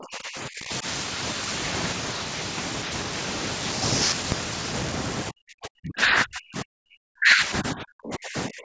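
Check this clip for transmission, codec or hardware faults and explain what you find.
There's one problem here, and it shows up twice: speech suppressed in double talk. From 0.0 to 0.85 s the speech sinks for roughly 0.7 s, down around 25 dB at worst. From 5.29 s to the end it's much harsher, with about 3 s affected and dips of roughly 40 dB. The likely cause is an echo canceller that couldn't separate the near talker from loudspeaker echo while both sides spoke, so it ducked everything. The call's microphone processing tops out at 8 kHz, consistent with wideband.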